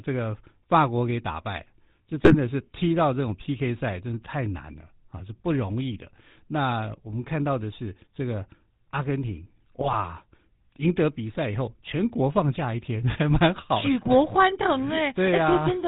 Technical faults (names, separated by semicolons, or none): GSM full-rate codec; GSM bit errors